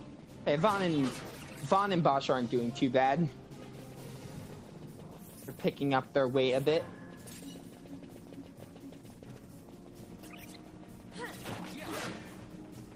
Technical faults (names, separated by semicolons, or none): none